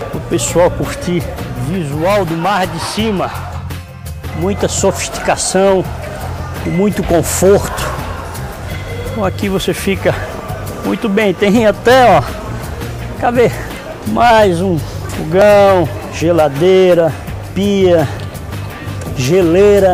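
Sharp single clicks at 15.42 s and 18.88 s are likely dropped samples: under a millisecond of audio missing, so the waveform jumps abruptly, drawing a thin vertical spectrogram line.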